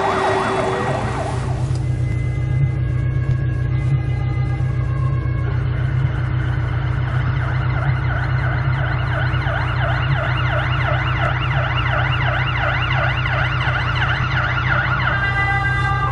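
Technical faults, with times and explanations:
No technical faults are audible.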